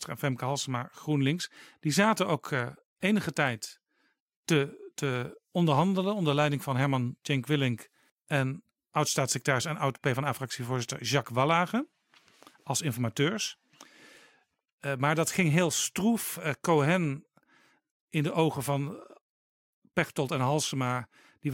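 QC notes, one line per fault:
No faults heard anywhere in the speech.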